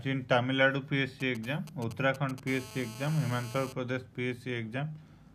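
From 1.20 to 2.40 s, GSM signalling bursts from a nearby 2G phone are rectified into a galloping tick-and-buzz pattern roughly 15 dB down, shown as clustered vertical striations. From 2.47 to 3.73 s, a steady GSM phone buzz from an active call sits about 16 dB below the audio, a raspy 217 Hz tone with evenly spaced harmonic lines stacked up the spectrogram.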